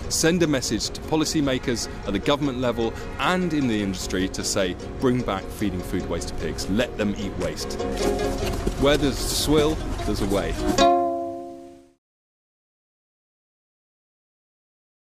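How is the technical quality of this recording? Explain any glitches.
No glitches or faults are audible.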